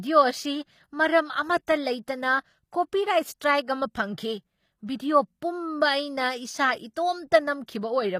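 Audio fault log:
Throughout: HE-AAC compression. The speech is plainly damaged by a low-rate codec, likely HE-AAC at a low bitrate, around 24 kbps. Only the lower spectrum is coded directly; the treble is synthesised by copying lower bands upward under a coarse envelope, so its harmonics fail to line up across the crossover and sibilants sound gritty and metallic. Nothing is present above 15.5 kHz.
1.67 s and 4.96 to 5.00 s: pre-echo. Ahead of two sharp onsets a short hiss appears, spanning about 12 ms at the first and 37 ms at the second. The transform codec spreads quantisation noise evenly across each block, so noise sized for the loud attack also fills the quiet interval preceding it. Each onset consequently sounds softened and smeared rather than crisp.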